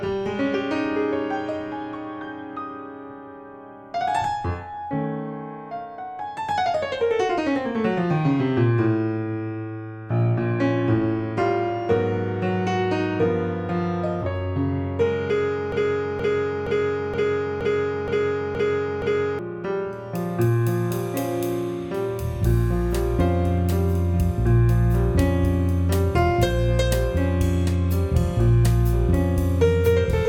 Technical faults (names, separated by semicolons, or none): broken-record loop